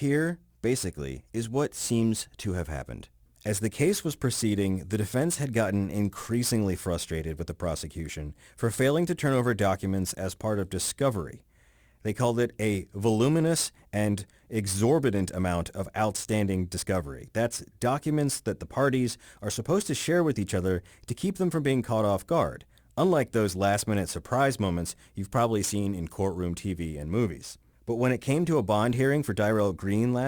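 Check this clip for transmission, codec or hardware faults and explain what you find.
One fault runs through the entire speech recording: crude rate conversion. Samples were picked nearest-neighbour style with no filtering, a pattern that fits a 48 kHz to 44.1 kHz change. The error sits roughly 25 dB below the signal and adds an inharmonic grit that tracks loud, bright sounds. A spectrogram shows faint stray tones that don't line up with the speech harmonics.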